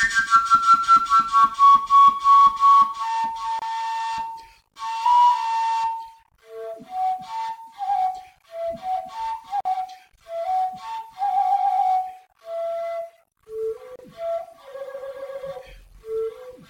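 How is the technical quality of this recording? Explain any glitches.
The recording has three short dropouts, each a gap at a join of encoded pieces. The audio was encoded in separate pieces and joined without trimming each encoder's start-up delay and final-frame padding, so brief silences open at 3.59 to 3.62 s (27 ms), 9.61 to 9.65 s (47 ms) and 13.96 to 13.99 s (32 ms). Each cuts the sound abruptly, with smeared edges, before it resumes where it stopped.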